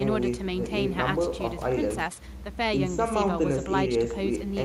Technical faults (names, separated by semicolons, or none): none